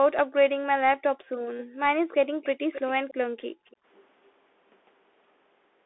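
Throughout, the speech carries the Bluetooth CVSD headset codec: nothing passes above 3.8 kHz, and the one-bit delta coder at 64 kHz cannot follow fast, loud high content, so sibilants turn scratchy over a constant granular hiss.

The room background is gated by the echo canceller at 0.24–0.38 s, 1.02–1.29 s and 1.65–1.83 s. Each time the canceller ducks the microphone while far-end audio plays, the ambience drops by up to about 40 dB and then recovers.

From 2.42 to 3.14 s a delayed copy of the speech trails it by 269 ms, about 15 dB down. This is likely an echo leak, where far-end loudspeaker pickup escaped the canceller.

The background gates again at 3.26–3.66 s. A faint echo leak fragment follows at 3.66–3.76 s, with the same 269 ms delay and about 30 dB below the speech.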